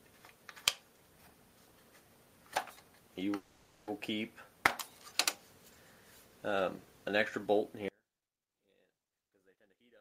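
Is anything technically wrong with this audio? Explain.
Yes, there are three faults.

From 3.35 to 3.89 s there is a call audio freeze. The last sound is stretched into a fading buzz for about half a second. The likely cause is delayed packets emptying the jitter buffer. Nothing is lost, but the rest of the audio runs 520 ms later.

From 7.88 s to the end, one channel is inverted, likely a polarity reversal on a single stereo side. When the channels are summed to mono, the shared content cancels and the level drops by about 36 dB. What remains is a faint difference signal.

From 9.10 to 9.81 s there is a jitter buffer speed-up. The receiver trims many short pitch-period slices, removing roughly a third of a second to shrink excess buffered delay. Playback runs at 140% speed with unchanged pitch, so the sound comes across as hurried.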